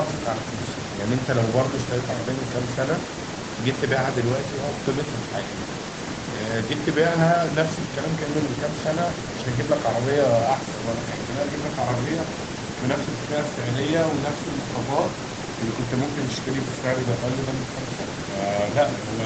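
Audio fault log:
Nothing stood out on listening to this speech.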